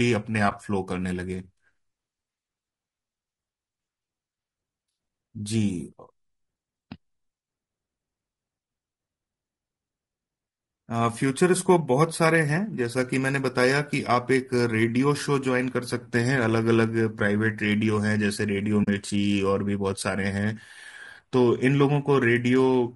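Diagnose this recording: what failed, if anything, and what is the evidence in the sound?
Throughout the speech the voice sounds rough and grainy, with a hiss-like fill between the harmonics and a top band that sounds thin and synthetic rather than airy. This is the signature of low-delay AAC compression, most likely AAC-ELD, at a rate that sounds around 32 kbps. At the codec stage, its short frames resolve pitch harmonics poorly, and at this bitrate the encoder cannot keep the fine structure, so noise fills the gaps and the highs are approximated.

At 0.49 to 0.52 s there is a brief dip, and at 18.83 to 18.88 s the sound fades out and back in, leaving a soft-edged hole. This is AAC frame loss with muting, at the network or decoder stage. The decoder zeroed the spectrum of the missing frames: one frame lost at 0.49 s and two at 18.83 s, which fits frames of about 20 ms each. The overlapping transform windows smear those zeros into gentle fades, so the gap has no sharp edge.

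At 20.57 s there is an abrupt jump forward in the sound, and no silence between the two sides. This points to a dropped buffer (overrun), likely at the driver or buffer stage. The program did not collect its samples before the hardware overwrote them, so roughly 20 ms of audio vanished and the surviving edges were butted together. That discontinuity produces the skip.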